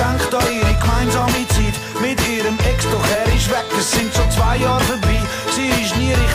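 No technical faults can be heard in this audio.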